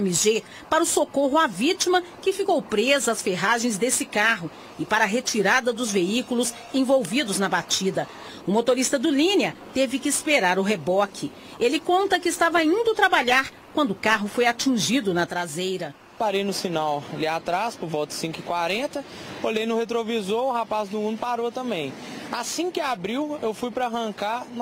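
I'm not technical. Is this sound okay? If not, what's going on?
No. From about 15.26 s to the end, everything suddenly gets noticeably quieter. That's one channel dropping out: one side of the stereo signal most likely went dead, so only half the sound reaches you.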